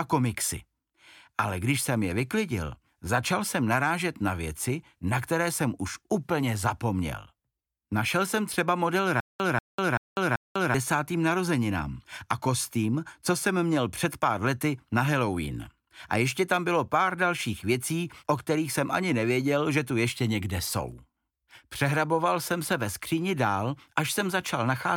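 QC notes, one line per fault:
9.20–10.74 s, stutter with silent gaps: a likely stream stall replays one 189 ms burst four times, each followed by 197 ms of digital silence, and the audio in between is lost.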